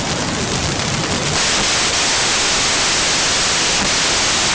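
From start to end, the speech is masked by samples built from the wrong bytes. Each sample's bytes were joined in the wrong order or alignment. The rapidly changing low bits became the large part of each value. It sounds like loud, harsh broadband noise, close to white on loud sounds.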